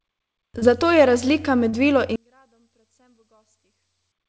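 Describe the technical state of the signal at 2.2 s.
At 2.2 s you're right inside the drop: from 2.16 s to the end at 4.29 s the speech falls by about 39 dB, which is likely one channel inverted. The centred speech cancels against itself in mono, leaving only a faint residue with nothing above 8 kHz.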